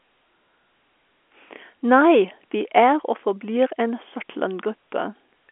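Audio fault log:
No faults can be heard in the clip. The G.711 telephone coding path keeps the sound within a telephone band of 250 Hz to 3.4 kHz, with nothing above 3.8 kHz.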